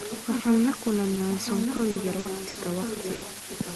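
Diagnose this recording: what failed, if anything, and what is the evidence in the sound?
The whole clip sits on a steady, even hiss, only about 10 dB below the speech, with no grit or distortion riding on the voice. That's low bit depth with dither, introduced at sample-format conversion. The signal was reduced to about 4 bits, and dither was added before rounding, so the quantisation error turned into flat white noise instead of harmonic crunch. The result is a constant noise floor that sits very close to the speech level.

There's an echo leak running from 0 to 3.75 s. A second copy of the voice trails the original by about 1.0 s and sits only about 5 dB under it, so it's quite prominent. This is likely a call-processing failure. The far end was on a loudspeaker, and its echo canceller didn't fully remove what its microphone picked up. The leftover got sent back down the line.

From 1.77 to 2.69 s you get repeated packet loss and that robotic, choppy texture. 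Four gaps land close together, and the longest is about 60 ms. Roughly a quarter of that stretch is concealment rather than real audio. This is a network problem. Each hole was patched by extending the last sound, giving about 190 ms of synthetic fill, and about 120 ms of actual speech never made it through.

At 3.15 to 3.25 s there's a single burst of packet loss, also on the network side. The receiver held the last sound and faded it out over about 70 ms, which is why you hear a brief buzz or fading hiss. Playback then resumes further along, and about 60 ms of speech is simply gone. The Opus call path itself, band-limited to about 12 kHz, is just carrying these faults through.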